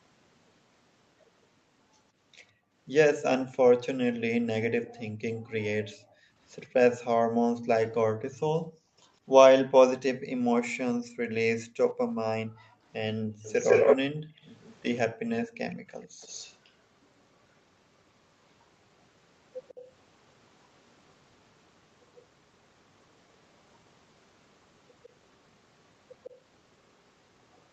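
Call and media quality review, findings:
Background gated by the echo canceller: room tone and background duck hard, about 40 dB at the deepest, at 2.52–2.73 s, 4.8–6.35 s, 8.63–8.94 s and 10.93–16.21 s. Roughly 0.2 s, 1 s, 0.3 s and 2 s actually gated. The AEC's suppressor clamps the mic while far-end playback is active, then releases, so the ambience pumps in and out.

Echo leak: delayed copy of the talker, about 153 ms late, at 13.43–16.72 s at roughly speech level, then 19.69–19.81 s and 26.24 s to the end at about 20 dB down. The likely cause is a far-end loudspeaker setup where the canceller didn't fully subtract the mic pickup and sent the residual back. It comes through within the 8 kHz band limit of the call path.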